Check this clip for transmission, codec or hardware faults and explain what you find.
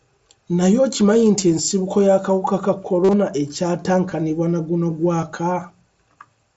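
Yes, there's concealed Bluetooth headset packet loss in this speech, carried over the mSBC headset link. Brief blips at 1.41, 4.10 and 5.21 s (about 15 ms each) are nearly hidden. From 3.04 to 3.13 s, scattered losses total 67.5 ms, including a 45 ms run. The receiver fills each gap by repeating a recent stretch of waveform, which sounds like a short buzzy tone with a slight warble as real audio returns.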